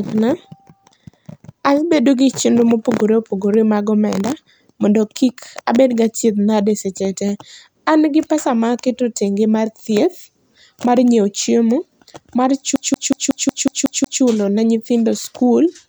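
Right after "mar nyiewo chiemo mar", at about 12.76 s, the speech gets caught in a CD stuck on one turn, and it doesn't let go until around 14.23 s, just before "ne nyithindo skul". A scratch keeps kicking the laser back one track, so the same 184 ms slice plays eight times, with a tiny mute at each jump. You get that quick, perfectly even stutter of a skipping disc.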